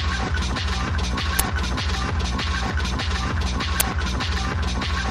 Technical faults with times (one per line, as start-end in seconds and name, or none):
1.39 uninitialised buffer
3.80 uninitialised buffer